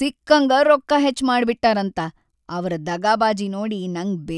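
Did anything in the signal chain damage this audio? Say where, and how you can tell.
No, nothing in the signal chain has damaged this speech recording. At no stage between capture and playback does the sound show any audible sign of harm.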